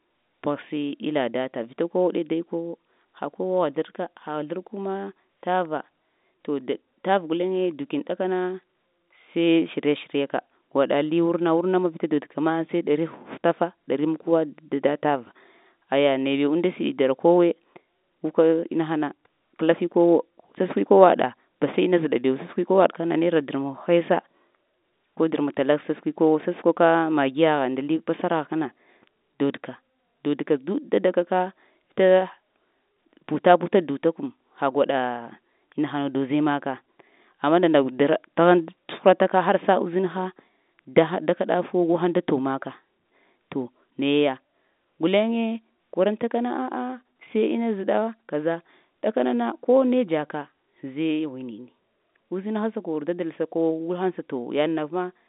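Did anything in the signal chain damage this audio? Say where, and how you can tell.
No, nothing in this speech stood out on listening as damage from any stage of the chain, beyond the narrow band of roughly 200 Hz to 3.7 kHz that comes with ordinary G.711 telephone coding.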